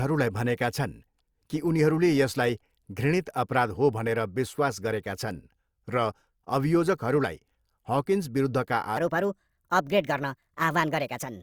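From 8.97 s to the end, the speech is a section at the wrong speed, 1.27 times fast and about four semitones high, sounding hurried and thin, likely from a clock mismatch. A spectrogram shows harmonics jumping upward at that point, and the waveform's syllables bunch tighter.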